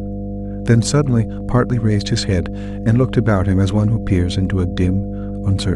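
A steady mains hum runs under the speech from start to finish, a low 50 Hz tone with some low harmonics above it, sitting roughly 10 dB below the speech. Power-line energy has leaked into the signal path, most plausibly through a ground loop or a nearby transformer.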